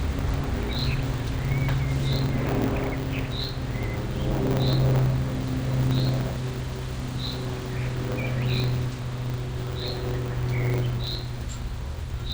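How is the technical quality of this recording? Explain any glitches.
The recording has one fault running throughout. A block size mismatch truncates each block: the tail of every longer written block is discarded, producing a 100 Hz buzz, and the audio plays about 1.09 times fast at roughly normal pitch.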